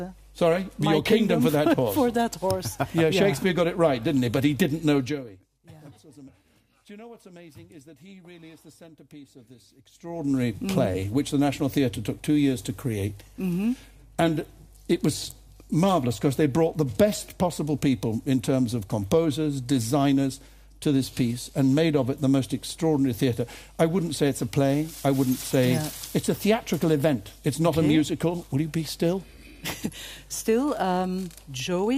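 At 4.97 to 5.41 s and again at 9.88 to 10.35 s there's zipper noise: the level drops, then rises, about 25 dB in unsmoothed 2 dB steps, ticking audibly.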